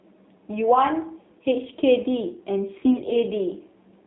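The whole clip runs through an AMR narrowband mobile codec. The band stops at 3.6 kHz, and the buzzy, synthetic texture fits a low rate of around 7.4 kbps. From 2.80 to 3.17 s come AMR bit errors, roughly one flipped bit in ten, so the decoder's pulses misfire and the voice turns hoarse and gargly.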